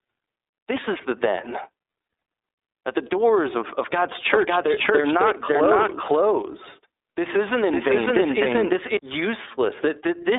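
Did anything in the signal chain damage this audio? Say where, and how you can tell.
Yes. The damage starts at the codec stage. The speech has been through the iLBC codec, which codes each frame independently. Its frame-by-frame texture fits 30 ms frames in the 13.33 kbps mode. The band is confined to roughly 300 Hz to 3.7 kHz, with nothing at all above 3.8 kHz. The codec damage is plainly audible throughout as a rough, slightly synthetic, buzzy quality, because the excitation is rebuilt frame by frame rather than carried smoothly across frames.

Further along the chain, a doubled audio track appears from 4.31 s to 8.97 s. This is likely a second capture path or an edit laying the same audio in twice, out of step. A full-band copy trails the original by about half a second at roughly equal level. It has no decay or room colour, so it is not a reverb. It also switches in and out abruptly at those two times.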